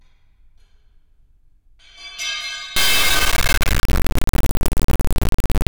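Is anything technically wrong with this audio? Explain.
Yes. From about 2.76 s to the end there's an integer-read-as-float fault. The sound points to 32-bit integer samples being read as 32-bit float, so the values come out either near zero or way past full scale. You get a brutal, buzzing square wave slamming between silence and clipping.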